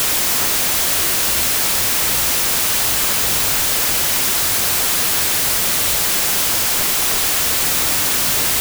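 Speech, affected for its full length by a wrong sample width: audio stored as 32-bit integers is being read as 16-bit integers. Each original sample splits into two values. One holds the top 16 bits and carries the real signal, while the other is the low-order half and comes out as loud wideband noise. The doubled sample count also plays the speech at 0.5x speed, an octave low, buried under that noise.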